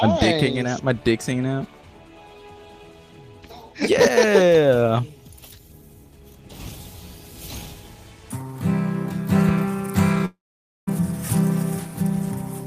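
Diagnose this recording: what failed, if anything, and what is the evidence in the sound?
Network stage: from 10.25 to 10.89 s the sound smears into a fading buzz, then about half a second of silence, likely a long network dropout losing roughly 0.6 s.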